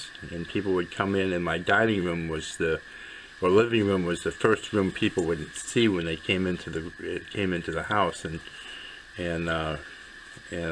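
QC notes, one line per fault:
No fault found in this clip.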